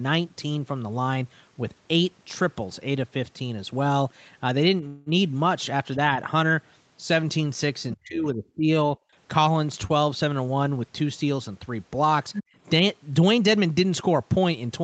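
At 4.87 s the speech stops moving forward and the last sound hangs on as a fading buzz or hiss until 5.08 s, then carries on from where it halted. This is a call audio freeze: packets were most likely held up in transit, the jitter buffer ran dry for 190 ms, and the receiver filled the wait, so the audio is delayed rather than lost.

From 7.95 s to 8.70 s the talker's voice sinks, at its deepest by about 30 dB. This is speech suppressed in double talk. Both sides were likely speaking at once, and the echo canceller, unable to tell this voice from loudspeaker echo, turned everything down.

Between 9.00 s and 9.15 s the room sound drops abruptly by about 22 dB and then returns. This is background gated by the echo canceller: while the loudspeaker was active, the canceller clamped the microphone hard, taking the ambient noise with it for that brief moment.

From 9.87 s to 9.91 s a sound is held a touch too long, with a faint buzzy smear. 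This is a short stall from a late packet. The packet missed its slot, so the jitter buffer stretched the previous audio for 22 ms and then resumed without dropping anything.

From 12.33 s to 12.44 s a second voice slips in, some 10 dB below the main speech. This is the other side's voice leaking through, likely loudspeaker playback that the echo canceller failed to strip from the microphone signal. Straight after, from 12.44 s to 12.55 s, the background is gated again, this time dropping by about 33 dB as the canceller clamps down once more.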